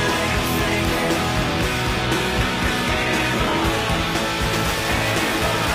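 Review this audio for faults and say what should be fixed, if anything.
From 2.04 s to 4.04 s, the adaptive stream drops to a lower bitrate. The top end suddenly vanishes, with nothing above 14.8 kHz. The highs turn thin, and codec artefacts grow. There is no gap at either switch. Only the quality jumps. The sound points to a fall from roughly 96 kbit/s AAC-LC to a 20 kbit/s HE-AAC rendition. That usually means the player's throughput estimate briefly dipped. Fix it with a larger playback buffer and a more conservative bitrate-switching rule.

From 4.54 s to the end, buffer tearing sets in. A robotic buzz at 375 Hz rides on the sound and is present only while signal plays. The writing process and the hardware reader have drifted, so they cross inside every period. About a tenth of each buffer replays audio from roughly 10 ms earlier, with a hard join on each side. The buzz rate fits a 128-sample buffer. 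Fix it by keeping the writer a safe margin ahead of the read pointer, using proper period synchronisation.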